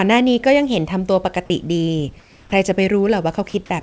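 From 2.20 to 2.52 s the real room background gives way to comfort noise for about 320 ms, likely because discontinuous transmission halted sending during the pause. The hiss is steady and featureless, about 3 dB quieter, showing as a flat, smooth band on a spectrogram.

At 2.49 s the onset is clipped by the voice detector, whose late trigger likely dropped roughly 30 ms of the sound's start. The sound begins abruptly, with no soft rise, and the waveform jumps straight from the flat noise floor into the sound.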